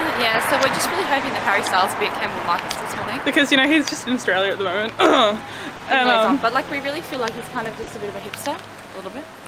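The audio has small timing hiccups scattered unevenly through the whole clip, brief repeats that make the flow feel unsteady. This is clock drift between sender and receiver: the sender's clock runs about one and a half percent slower than the receiver's, so the jitter buffer keeps draining, and the receiver repeats short slices, or briefly runs dry, to keep playing. Three further snags come at 2.72 s, 5.77 s and 7.84 s, each lasting about 60 ms. In each one the current sound is held too long, with a slight buzzy or dipped quality, before carrying on from the same point with nothing lost. These are short stalls from a late packet: a packet missed its playout time, the buffer ran empty, and the receiver stretched the last audio by about 30 ms until the packet arrived. Each stall also leaves playback running about 30 ms further behind.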